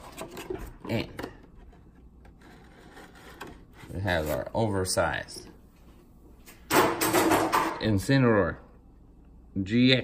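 The sound runs fine up to about 4.08 s, then from 4.08 to 7.70 s it turns thin, bright and hissy-edged, which is classic pre-emphasis left on. The top end matches the FM 50 µs curve, sitting about 11 dB hotter at 10 kHz than at 1 kHz, so the treble lift meant for transmission got through without its matching de-emphasis cut. At 7.70 s the balance drops back to normal.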